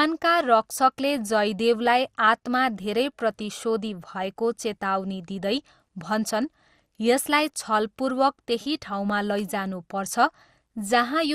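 From start to finish the speech sounds dull and gurgling, with a granular, watery roughness and upper frequencies that flicker in and out rather than stopping at one fixed edge. That unsteady top end is what sets it apart from a plain low-pass filter, and the grainy gurgle with no swirling pre-echo points to MP2 compression rather than MP3. The likely cause is a coder starved of bits, which fits a rate around 80 kbps, dropping upper sub-bands and quantising the rest coarsely.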